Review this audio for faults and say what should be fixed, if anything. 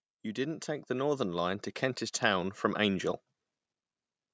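Automatic gain rising occurs from 0.36 to 1.62 s and again from 2.2 to 3.1 s. The call's gain control judged the input too quiet and pushed its level up gradually, by about 5 dB and then about 4 dB, so the speech and the room behind it swell together rather than the talker getting louder. The call microphone processing's band limit, with nothing above 8 kHz, is normal and not a fault. To prevent it, keep a steady, adequate input level or disable automatic gain control.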